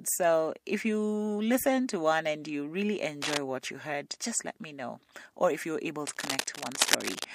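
A worn cable or connector likely shifting changes contact resistance, adding cable scratch noise at 3.22–3.37 s and 6.06–7.25 s: rough crackling, only slightly quieter than the speech.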